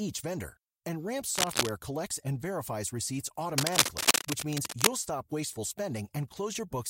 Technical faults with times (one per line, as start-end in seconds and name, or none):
1.35-1.70 cable scratch noise
3.58-4.89 cable scratch noise